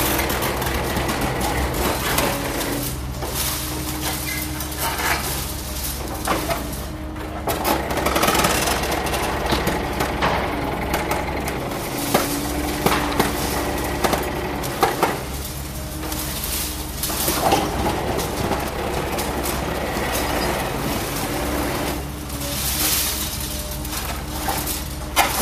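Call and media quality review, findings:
Nothing stood out on listening to these sounds, so no findings to log for this clip.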